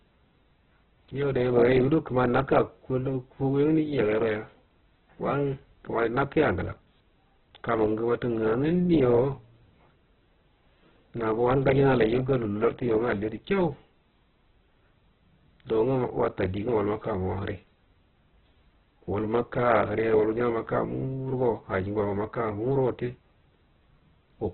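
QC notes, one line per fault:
throughout: Opus compression, likely near 8 kbps; speech sounds grainy and rough because bands are noise-filled, and the spectrogram is cut flat at 4.2 kHz.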